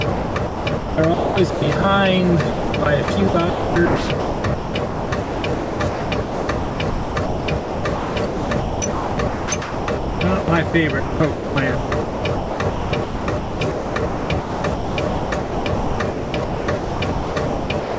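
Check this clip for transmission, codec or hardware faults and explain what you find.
One fault runs through nearly the whole recording: sound chopped by the voice detector, in three stretches, from 0.12 to 1.84 s, 2.50 to 10.74 s, and 11.00 to 17.98 s. Within them, roughly 1 s, 5.2 s and 4.8 s of sound respectively are replaced by comfort noise. The likely cause is the sender's voice detector repeatedly gating transmission off, so the receiver substitutes synthetic noise for quieter passages. The result is choppy. The call path itself is band-limited, with nothing above 8 kHz.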